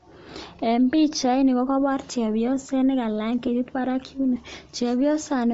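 From the start, the speech has a breathy, grainy edge, and the upper range sounds thin and hissy. This is likely Bluetooth LC3 compression. The damage is plainly audible throughout. LC3 is a transform codec. At a modest rate, it throws away much of the high spectrum and fills the gaps with noise. That swapped-in noise is the graininess heard here. The character fits a rate around 32 kbps with 10 ms frames.

At 0.32 s there is a brief smeared blip. This is lost LE Audio frames. A single frame went missing, about 10 ms of audio. The decoder covered the gap by reusing the previous frame's spectrum with random signs. That gives a short noisy wash instead of a clean sound. At 3.47 s the same thing happens again, with one more lost frame. Both gaps are too short to fade toward silence.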